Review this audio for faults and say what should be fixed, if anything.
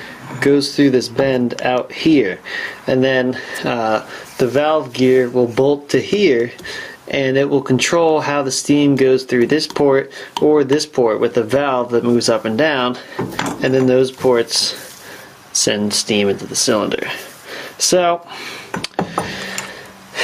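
Gain pumping runs through the whole clip, a level swing of around 15 dB. Loud and quiet passages sit squeezed close together. This is likely input gain set far too high, with a fast limiter or compressor pulling it down on each peak. Unlike a noise gate, the background never cuts to silence. To prevent it, lower the input gain so peaks stay below the limiter threshold and use gentler, slower compression.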